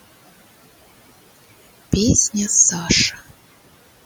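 Noise suppressor artifacts run through the whole clip. Bands judged to be steady noise are cut by about 16 dB frame by frame, so the room noise sinks in pauses and rises under speech. Unlike a gate, this acts per band, not on the whole signal.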